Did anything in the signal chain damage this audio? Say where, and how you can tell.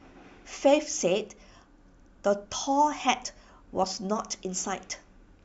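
Yes. DAB burbling appears from 3.77 to 3.87 s, damage that entered at the broadcast reception and MP2 codec stage. In that tenth of a second the speech picks up short blips of noise in single sub-bands. Weak reception let a small share of bits, around 0.2 percent, slip past error correction, corrupting the audio data. Six audio frames were damaged.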